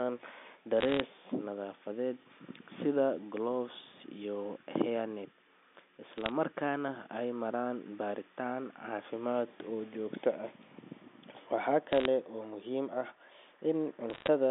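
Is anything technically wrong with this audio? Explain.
Yes. Short bursts of sharp ticks and crackle sit over the speech from 0.81 to 1.00 s, 6.18 to 6.32 s, 11.93 to 12.05 s and 14.10 to 14.28 s. These are bit errors on a digital phone line: roughly 0.4 to 0.5 percent of bits flipped on this G.711 telephone-band line, each corrupting one sample, and hits on sign or high bits produce the clicks.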